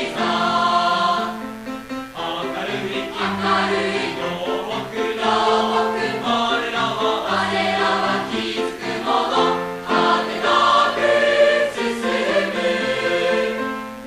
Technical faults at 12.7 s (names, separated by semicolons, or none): mains buzz